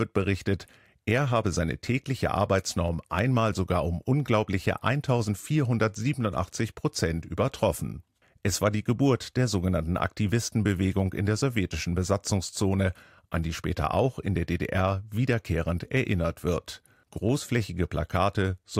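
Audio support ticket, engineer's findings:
Regular clicks through the speech, every 0.8 s from 0.48 s to 18.09 s, around twenty in all. Likely clock drift buffer slips: two unsynchronised clocks roughly 200 ppm apart, each slip dropping or repeating a few samples. Thin vertical broadband lines on the spectrogram, small step discontinuities in the waveform.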